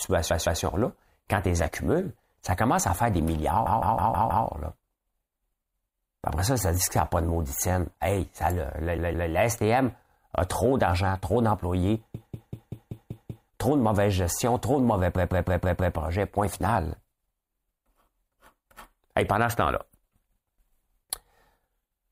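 A stutter, with the same fraction of a second looping, is heard at 0.30, 3.66, 8.98, 12.14 and 15.15 s. These are repeated frames: a 160 ms block (192 ms at 12.14 s) was decoded two to seven extra times, adding 0.32 to 1.34 s.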